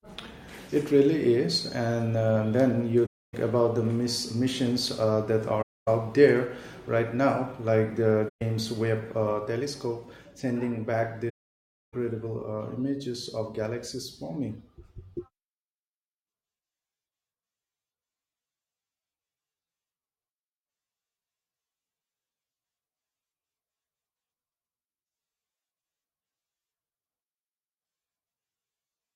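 AAC frame loss with muting drops the speech into soft-edged silences at 3.05 s (after "uh then"), 5.62 s (after "missions uh that"), 8.28 s and 11.29 s (after "sending back"), lasting about 0.28, 0.26, 0.13 and 0.64 s. Lost frames were decoded as zeroed spectrum, and overlapping windows fade each gap out and in.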